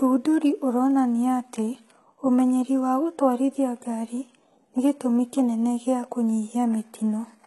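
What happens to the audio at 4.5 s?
At 4.5 s the speech has gritty, metallic treble, with s sounds that come out lispy, and nothing at all above about 11.8 kHz. The coloration isn't confined to that moment but runs through the whole clip. The likely cause is heavy HE-AAC compression at a very low rate, with the sound pointing to around 16 kbps. The codec keeps only the lower spectrum and rebuilds the treble from copied lower bands under a coarse envelope, so the upper harmonics no longer line up with the real ones.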